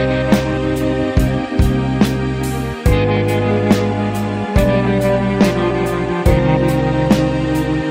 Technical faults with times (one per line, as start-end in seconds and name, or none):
none